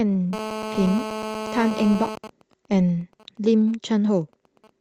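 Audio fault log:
0.33–2.15 s, GSM phone buzz: A hard, raspy buzz sits under the speech here, pitched at 217 Hz with a dense stack of harmonics and only about 9 dB below the talker. A 2G phone on an active call is close by and firing out radio bursts 217 times a second. The audio circuitry rectifies those pulses into a square-ish buzz, which is why it stays steady and ignores what the speech is doing.
2.17–4.70 s, GSM signalling bursts: The steady buzz stops and turns into even ticks with a longer 217 Hz buzz twice a second, sitting well down, around 20 dB under the speech. The phone is still on the call, but its user has gone quiet, so it only sends short groups of radio bursts instead of a continuous stream. Each group gets rectified by the audio path the same way, which gives you that stuttering rhythm in place of a constant drone.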